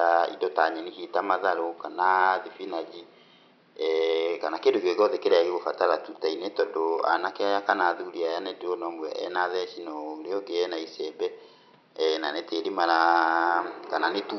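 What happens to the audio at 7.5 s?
Nothing goes wrong at 7.5 s; the speech carries on intact, with only the room's own background noise sitting about 35 dB below it.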